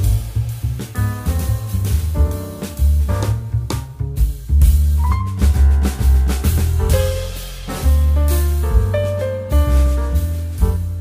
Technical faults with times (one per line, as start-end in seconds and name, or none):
none